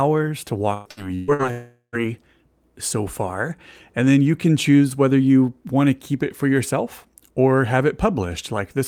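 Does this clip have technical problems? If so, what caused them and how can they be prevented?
Yes. From 0.73 to 1.42 s there is repeated packet loss with a robotic sound. Four gaps, the longest 129 ms, are patched by stretching the previous sound, so about half that span is synthetic. It sounds choppy. On a spectrogram, smeared, repeated harmonic slices alternate with normal frames. A jitter buffer with forward error correction or redundancy would prevent this.

From 1.51 to 1.96 s comes a longer break, likely a long network dropout. The last sound is extended as a fading buzz or hiss for roughly 0.4 s, then about 100 ms of silence follows before the audio resumes with that portion missing. A waveform shows a decaying tail and then a flat gap. A more stable connection, such as wired rather than congested Wi‑Fi, would prevent it.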